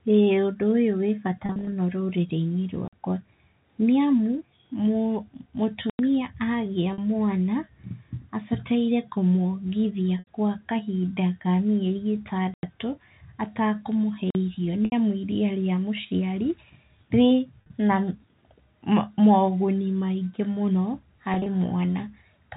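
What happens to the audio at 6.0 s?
A block of digital silence runs from 5.90 to 5.99 s. For about 93 ms the speech drops to silence, which fits a 4096-sample buffer left unfilled. Unlike a fade or a concealed gap, it cuts abruptly and is heard as a short hole.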